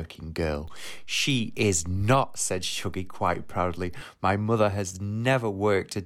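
At 0.68 s a DC step shifts the waveform's zero line by about −37 dBFS, holding until 4.01 s, where it returns. Each jump gives a single low thump while the speech continues untouched, unlike a dropout click, which interrupts the signal, or steady low-frequency hum.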